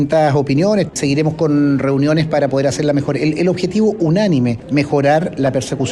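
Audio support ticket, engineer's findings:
Clock drift between sender and receiver, whole clip. Sender clock runs about 2% slow against the receiver. Jitter buffer keeps draining. Probable component: sender audio clock.

Repeated timing corrections, 0.78 s to 5.70 s. Small hiccups at uneven intervals, all stretching the audio. Receiver repeats short pieces to cover the slow feed. Playback runs at 98% speed. Roughly a tenth of a second added overall.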